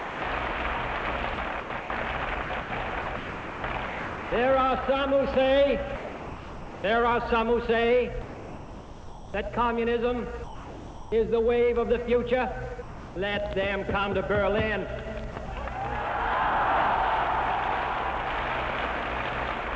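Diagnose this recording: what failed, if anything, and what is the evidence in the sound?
In the call processing stage, the sender's voice detector likely classed the sound as background and stopped transmitting, so the receiver substituted comfort noise. The sound gives way to steady synthetic noise at 0.00–0.22, 5.96–6.84, 8.22–9.34, 10.44–11.12 and 12.82–13.16 s, and at 19.76 s, returning each time detection retriggers.

The same voice detector also likely toggled between sending and not sending more than once within a stretch, which is sound chopped by the voice detector. From 1.34 to 4.32 s, about 1.4 s in total is swapped for comfort noise, with a further 60 ms cut between 15.32 and 15.48 s. The sound turns choppy.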